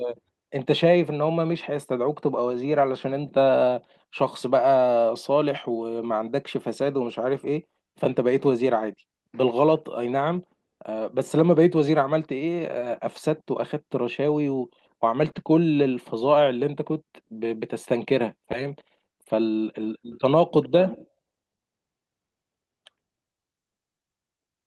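Lost packets rebuilt from error correction at 2.51–2.57, 6.83–6.85, 11.77, 12.77–12.87 and 15.23–15.29 s were filled from low-bitrate copies carried in later packets, so these stretches turn briefly rough and noisy. At 15.31–15.35 s a short concealed packet loss follows: about 20 ms arrived too late and was extrapolated from the preceding sound, giving a quick smear. Rebuilt frames continue at 15.35 and 16.31–16.33 s, each with the same grainy texture.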